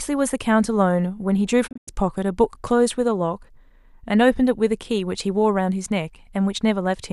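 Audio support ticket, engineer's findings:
Digital broadcast dropout in speech, 1.66 to 1.89 s. Signal mutes in several short holes scattered across about 190 ms, totalling about 144 ms of lost audio, longest hole about 96 ms. Each mute enters over a 20 ms fade. Probable component: receiver/decoder muting on lost or checksum-failed frames. Hole sizes fit roughly six frames of 24 ms. Waveform shows flat-line gaps with short tapered edges. Spectrogram shows full-band vertical blank strips, then speech resuming.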